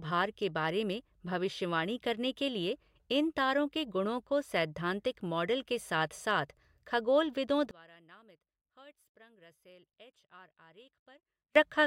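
One channel inverted, 7.71 to 11.56 s: the voice falls about 27 dB, likely because one channel's flipped polarity cancels the other in mono.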